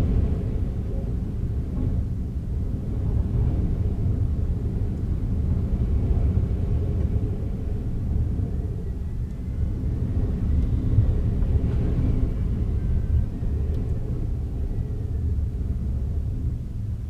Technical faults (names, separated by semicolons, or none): none